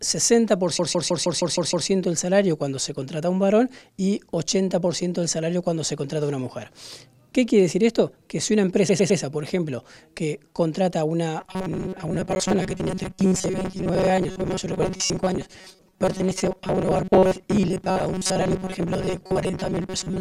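A run of compressed audio was delivered more than once, so the decoder played the same stretch again. From 0.79 to 1.88 s a 156.7 ms block, which fits a group of about six frames, repeats 7 extra times, adding about 1.1 s and producing a stutter. From 8.88 to 9.20 s a 104.5 ms block plays 3 extra times, adding 0.31 s of the same repeated frames stutter. From 11.41 s to the end, fresh audio appears to arrive too seldom, and the gaps are likely being filled by looping the last short buffer while the real material is dropped, with roughly half the sound affected. Each loop lasts about 5.3 ms, which imposes a fixed 188 Hz buzz and gives this robotic sound from repeated short buffers a rigid, metallic quality. At 12.35 s, early in that stretch, 10 ms of zeros went out. This block of digital silence cuts in and out with no fade, and being so short it comes across as a tick or dip rather than an audible hole.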